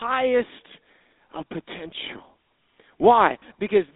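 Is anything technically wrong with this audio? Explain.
Yes, there are three problems. Throughout, the speech has passed through the GSM full-rate codec. That coder models the vocal tract and excites it with a sparse, regularly spaced pulse train, which fits the 13 kbps full-rate standard. The band runs only from 250 Hz to 3.7 kHz, and the coding damage is plainly audible as a buzzy, gravelly roughness.

From 0.55 s to 3.04 s, a clock-matching stage has likely made a drift correction step. Playback slows by about 6.2% in one jump, then snaps back. Speed and pitch drop together by about 110 cents, a little over a semitone, so the speech sounds suddenly detuned and draggy.

At 3.40 to 3.43 s there are lost GSM frames. A 20 ms gap points to one frame. The decoder filled it by repeating the last good frame's settings, so the speech briefly freezes into a short, rough, metallic ring.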